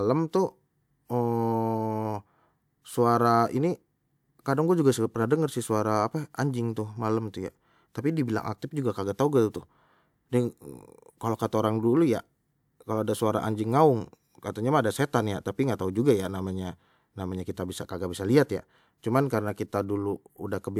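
No technical faults can be heard anywhere in this speech recording. There is nothing to place on a timeline, since no moment stands out as going wrong.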